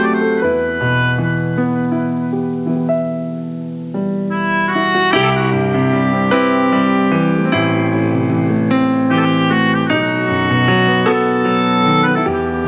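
No technical faults can be heard: the audio carries the narrowband character of a telephone-grade call path, with nothing above 4 kHz, consistent with a G.711 A-law codec at 64 kbps.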